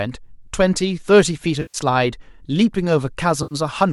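AAC frame loss with concealment occurs at 1.62 to 1.78 s and again at 3.43 to 3.55 s in this speech. In each gap, compressed frames never reached the decoder, so it rebuilt the missing stretch from the last good spectrum, with randomised phase. The result is a brief smeared, noisy and phasey patch rather than a clean dropout. The gap lengths fit runs of short low-delay frames, likely from AAC-ELD.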